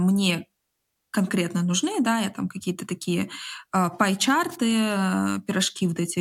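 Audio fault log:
4.51–4.56 s, wireless microphone noise hit: a brief burst of static, about 57 ms long, breaks through the speech as the FM radio link from the microphone momentarily fades when reflected signals cancel at the receiver. With the carrier weakened, receiver noise swells and partly masks the voice. On a spectrogram it appears as a thin vertical smear of broadband energy. The waveform shows a short, ragged hash riding over the speech envelope.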